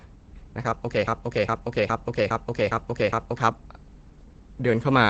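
From the start the whole clip sounds muffled and hoarse, with nothing above about 8.5 kHz. That's the sound of heavy Opus compression, most likely running in its speech (SILK) mode at a very low rate, somewhere around 12 kbps.

Then from 1.08 s to 3.38 s it turns into a broken-record loop: a 0.41 s fragment plays six times back to back. The stream probably stalled and kept resending its last chunk, so whatever should have played there is gone.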